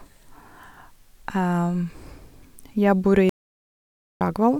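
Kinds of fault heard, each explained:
Audio dropout to silence: The speech cuts out at 3.29 s and returns at 4.21 s. The 0.91 s gap is total silence, with no room tone. Nothing spoken then survives. The likely cause is a lost input while the recorder kept writing silence.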